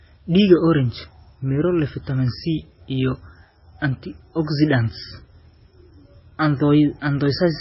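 Throughout the speech, nothing reaches above 5.6 kHz, and the sound is heavily watery and swirly, with smeared attacks. This is likely MP3 compression starved of bits, which fits a bitrate near 18 kbps: the encoder cuts the treble at a fixed point and zeroes weak frequency lines that flicker between frames.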